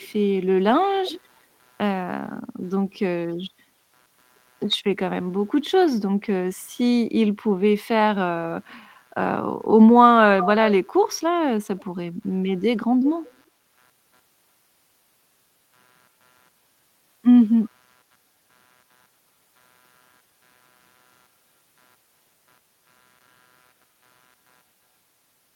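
Throughout the clip, a faint computer activity noise sits at about 45 dB below the speech, a buzzing pulse near 150 Hz. Load changes in the machine are shifting the audio circuit's ground. Unlike mains hum, it rises and falls with the computer's activity rather than holding steady.

At 0.0–0.08 s, 10.4–10.47 s, 11.79–11.85 s and 13.22–13.43 s come short copies of the speech trailing by about 343–349 ms. This is likely an echo leak, where a far-end loudspeaker's echo canceller failed to remove all of what its microphone picked up and the residue was sent back. The copies sit around 30 dB down, except at 10.4 s, where the copy is nearly as loud as the speech. Room reverberation would give a smeared tail. These are distinct scraps repeating at a fixed delay.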